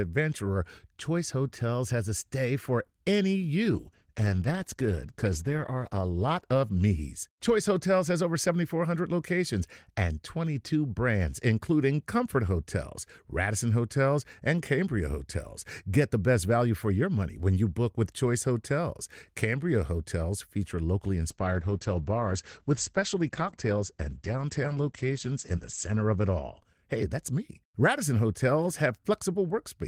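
From 3.72 s to 8.47 s the speech turns coarser and grainier, then clears. This is a call bitrate drop: the encoder was given far fewer bits after the bandwidth estimate fell, which fits a fall from 32 kbps to around 13 kbps, held at its lowest for about 1.9 s. From 21.31 s to 28.05 s the speech loses its top end and sounds muffled as well as coarser. This is a second call bitrate drop, consistent with roughly 11 kbps at its lowest for about 3.9 s, and the audio bandwidth narrows from 20 kHz to 8 kHz before recovering.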